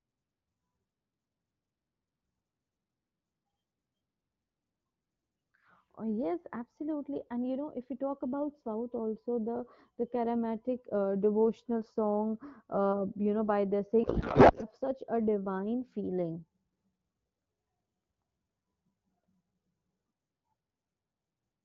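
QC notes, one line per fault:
14.03–14.65 s, codec payload misread: between "you know by the" and "such a divine feeling" the speech gives way to garbled noise and warble that barely follows it. The decoder is reading AMR-WB frames with their fields shifted, which points to octet-aligned packing being read as bandwidth-efficient. Unlike packet loss, there is no gap, muted stretch or smoothed repeat. The output stays continuous but scrambled, and clear 12.65 kbit/s speech returns at once when the packing matches again.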